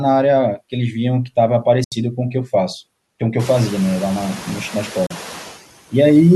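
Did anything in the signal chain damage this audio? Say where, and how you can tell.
Yes. Call processing shows noise suppressor artifacts throughout. Steady noise is pulled down by about 14 dB, frame by frame, so it dips between phrases and swells under speech. It is clearest after the room noise rises about 21 dB near 3.5 s.

There are two silent holes, at 1.84 to 1.92 s (75 ms) and 5.06 to 5.11 s (37 ms). Both have abrupt edges or a fade of a few milliseconds, and the audio resumes further along. A Bluetooth dropout on the playback link is the likely cause: late packets were discarded. The gap lengths fit roughly four and two packets.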